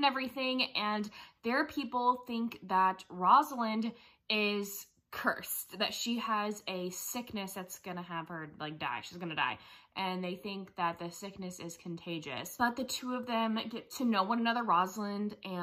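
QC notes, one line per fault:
No faults found; nothing to log.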